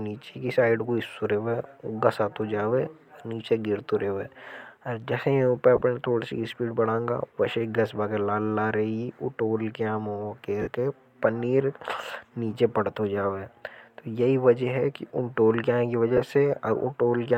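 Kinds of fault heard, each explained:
Lost LE Audio frames: bits of the Bluetooth stream dropped out and the decoder filled each gap by replaying the last spectrum with scrambled signs, so you get short noisy smears of 15 to 52 ms, right before "थोड़ सी स्पीड बढ़ांगा" and "के पनीर", and after "टोल के आएं की".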